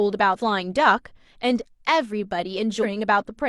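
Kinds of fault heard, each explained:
Compressed frames skipped: whole frames never play, so the speech lurches ahead, roughly 150 ms once and 400 ms later.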